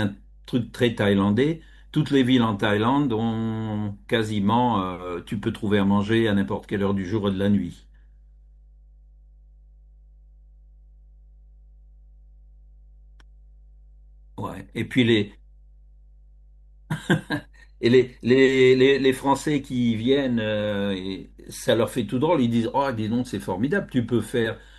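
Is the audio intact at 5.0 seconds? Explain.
No. At 5.0 seconds, as across the whole recording, the speech carries mains hum. A ground loop or a nearby transformer is letting the 50 Hz power line leak into the signal path, so the 50 Hz component rides along under the speech. That sounds like a steady, low drone with some low harmonics, sitting roughly 30 dB below the speech. It is quiet but constant.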